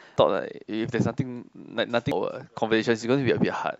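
At 0.16 s and again at 2.12 s, damaged data in the compressed stream makes the decoder misread frames and lose sync. Each event is a brief chirp, squawk, click or short hole in the speech.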